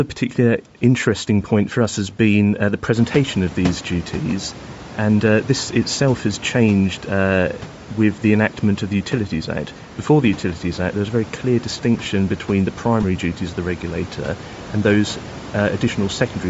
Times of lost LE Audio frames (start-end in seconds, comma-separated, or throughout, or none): 13.03